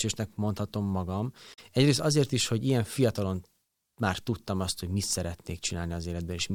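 It's a short speech clip with one glitch worth flagging: right after "mondhatom magam" there's a brief glitch from about 1.53 to 1.59 s, roughly 60 ms. That's damaged data in a compressed stream. A stretch of the encoded bytes got corrupted, so the decoder garbled those frames, lost its place, and jumped forward to the next valid frame header.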